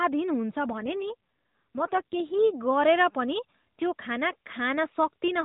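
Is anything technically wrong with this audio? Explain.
Yes. From 0.72 s to 2.47 s there is an AMR rate drop. The mobile link forced the AMR-NB codec down to a lower mode and spent the freed bits on protecting the stream, and the roughness fits a fall from around 12.2 kbps to 5.9 kbps. With fewer pulses to model each frame, the speech turns buzzier and more synthetic for that stretch, with no gap and no change in bandwidth, before returning to the lightly coded narrowband sound.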